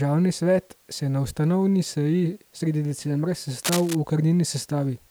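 From 3.63 to 3.95 s a burst of cable scratch noise rides over the speech: dense, irregular scratching and rustling, only a little quieter than the speech itself, for about a third of a second. The likely cause is a worn cable or connector being moved, its contact resistance fluttering rapidly. Unlike isolated clicks or a clean dropout, the noise is a clustered, uneven texture with no gap in the signal beneath it.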